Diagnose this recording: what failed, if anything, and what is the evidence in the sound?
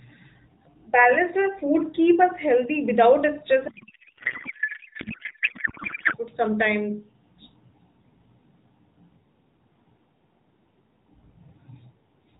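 Codec stage: a codec payload misread from 3.68 to 6.17 s, where the speech collapses into garbled noise and warble that barely follows it, clearing right before "food sometime". The AMR decoder is pulling fields from the wrong bit positions, which points to octet-aligned packing being read as bandwidth-efficient.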